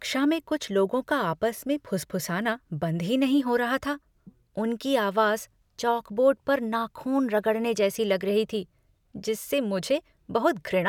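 A speech recording with no technical faults to point to at any moment. Nothing in it stands out as a dropout, click, distortion or other problem anywhere in the audio.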